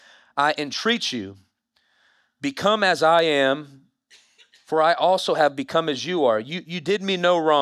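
No technical faults are audible anywhere in this clip.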